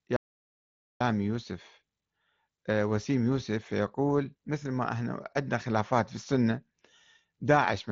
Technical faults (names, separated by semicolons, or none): audio dropout to silence